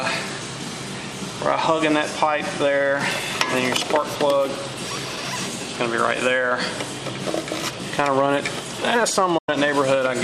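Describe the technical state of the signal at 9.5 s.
At 9.5 s the sound is just coming back from a digital broadcast dropout spanning 9.38 to 9.49 s. The receiver stopped getting decodable frames and muted after an 8 ms fade, losing about 96 ms, which fits roughly four frames. Unlike an encoder glitch, the gap is clean silence rather than garbled audio, and playback resumes further along with the missing material simply gone.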